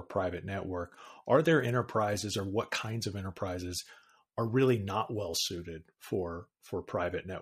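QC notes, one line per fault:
Nothing to flag here; the speech comes across with no faults worth a line.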